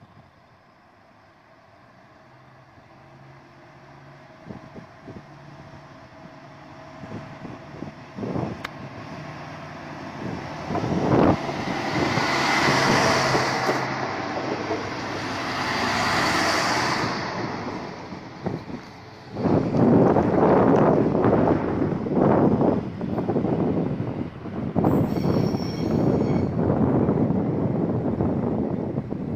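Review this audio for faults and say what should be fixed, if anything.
No faults turn up in the audio, so nothing needs to be fixed.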